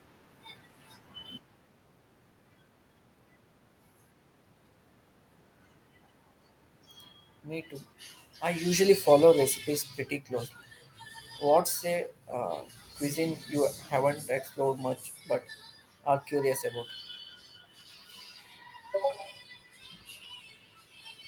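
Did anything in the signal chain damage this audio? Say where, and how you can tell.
Yes, in the call processing. Between 8.7 and 10.02 s the automatic gain control falls: it decided the input was too hot or too noisy and backed its gain down by about 6 dB over that stretch. The giveaway is that the room noise sinks right along with the speech, which a talker simply moving wouldn't do. There's also a genuine shift in the talker's position around 8.5 s, just before the AGC starts pulling back.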